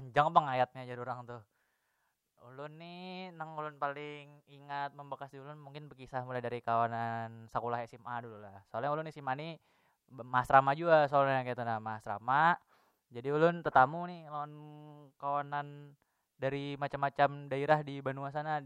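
Speech recording, no technical faults detected.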